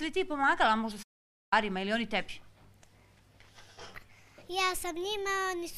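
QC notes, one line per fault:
1.02–1.53 s, playback stall: the audio cuts out in mid-flow and the output sits silent for about 490 ms before sound returns. The break is abrupt at both edges, with no fade or decay tail leading in, so it reads as output halting rather than a quiet passage in the material. The likely cause is the player running short of data or its output thread being blocked, leaving nothing to send until it recovered.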